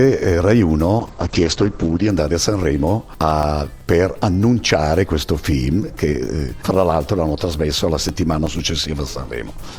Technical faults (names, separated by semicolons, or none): call bitrate drop; CD scratch ticks